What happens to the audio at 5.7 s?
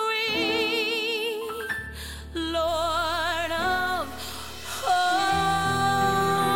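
At 5.7 s the audio is inside a stretch of low bit depth without dither. It runs from 2.68 s to the end of the clip. The sound turns grainy and rough, and the grit shifts as the sound changes. Quiet parts suffer most. They crackle or sputter instead of fading smoothly. The likely cause is rounding to very few levels with no dither, which fits about 6-bit truncation. The resulting error sits only about 25 dB below the signal.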